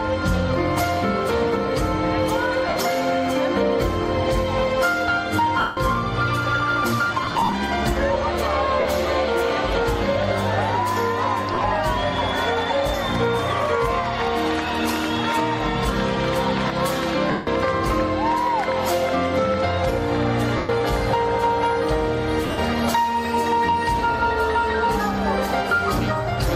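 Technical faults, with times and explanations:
2.69–2.76, 5.60–5.77, 7.23–7.53, 8.80–8.85, 11.54–11.64, 17.31–17.47, 20.57–20.69 and 22.46–22.58 s: lost LE Audio frames. Bluetooth dropped 50 to 170 ms of audio each time, in broken clusters at 7.23, 11.54 and 22.46 s. The LC3 decoder refilled each gap with the last spectrum under random signs, fading it, so the sound smears into brief noisy hiss.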